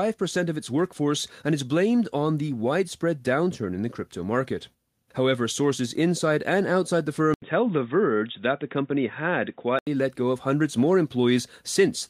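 At 7.34 s, after "inside and outside the", comes an 80 ms silence. Then the sound turns dull, with nothing above 3.8 kHz, until 9.87 s. Likely an input switched to a poorer device.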